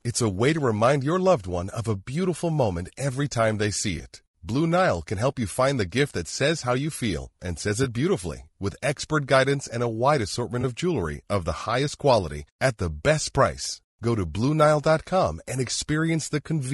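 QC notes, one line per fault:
throughout: low-delay AAC compression. The speech sounds rough and grainy, with noise filling the gaps between harmonics and a thin, synthetic top band. This is likely short-frame AAC-ELD coding at a rate that fits about 32 kbps. A spectrogram shows smeared harmonics and patchy upper-band energy.
3.97 s, 7.83 s, 10.61 s: AAC frame loss with concealment. Each time, about 20 ms of audio is replaced by a guess built from the previous spectrum, so a brief smeared, noisy or phasey blip appears. A spectrogram shows a short vertical smudge with blurred harmonics.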